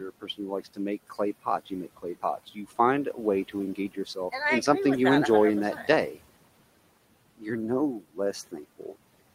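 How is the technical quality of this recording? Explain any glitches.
The recording's main flaw is speech cut by the noise suppressor, heard at 0.0–0.79 s, 1.1–2.78 s, 3.14–4.33 s (ending just before "in something you enjoy"), 5.76–6.18 s and 8.0–8.96 s. The suppressor mistakes quiet parts of the speech for the room noise, which sits about 20 dB below the talker. It pulls them down by about 9 to 19 dB, worst near 8 s. In each span, roughly 0.15 to 0.3 s in total sounds swallowed or faint.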